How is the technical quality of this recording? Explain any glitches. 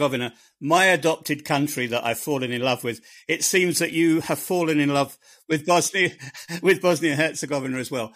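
One glitch: hard clipping from 6.69 to 7.21 s. The speech overdrives a stage by about 5 dB, so its peaks are sliced flat, adding harsh crackle. The waveform shows squared-off tops, and the spectrogram shows bright high-frequency smear.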